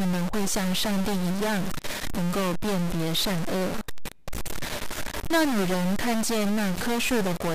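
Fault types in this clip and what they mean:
Stuck bit: Distortion runs through the whole speech clip, and the pauses fill with a hiss that follows the signal's sign rather than sitting steady. The likely cause is one data bit held at a fixed value, which unlike clipping also corrupts quiet passages.
Word clock ticks: Sharp ticks of uneven strength repeat about every 0.07 s from 0.14 s to 7.54 s, roughly a hundred in all. Each ticks at a single slipped sample, fitting unlocked clocks a few hundred parts per million apart. Their steady spacing distinguishes them from random clicks.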